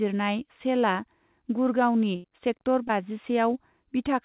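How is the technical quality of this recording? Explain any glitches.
The speech has two packet-loss glitches close together. It also has a narrowband sound with nothing above 4 kHz, which fits a G.711 telephone codec at 64 kbps.

A burst of packet loss hits from 2.16 to 2.26 s. About 80 ms of audio never arrived in time. The receiver extended the last sound for roughly 77 ms, fading it down. You hear a brief held buzz or hiss, then speech resumes with a piece missing.

A short concealed packet loss follows from 2.88 to 2.91 s. About 20 ms went missing. The receiver synthesised a continuation of the preceding sound, then blended back into the real signal. It comes across as a quick smear or wobble.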